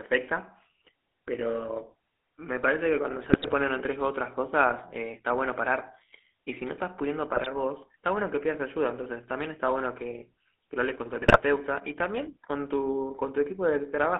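A speech recording with a buzzy, gravelly roughness from start to finish and a thin, boxed-in tone. The band runs only from about 250 Hz to 3.5 kHz, with nothing above. That is the GSM full-rate codec: the voice is rebuilt from a vocal-tract model driven by a coarse, regularly spaced pulse train, so fine detail in the excitation is lost and the harshness is plainly audible. It fits the 13 kbps GSM full-rate coder. Three short bursts break through that steady texture as squawks, pops and a gargling warble, at 3.24 to 3.53 s, 7.35 to 7.47 s and 11.22 to 11.41 s. These are GSM bit errors. Corrupted bits in the transmitted filter, pitch and gain parameters make the decoder produce frames with a warped spectrum or jumps in level. The damage sounds like a couple of percent of bits flipped on a weak radio link.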